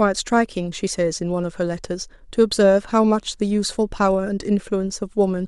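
No technical faults can be heard anywhere in it.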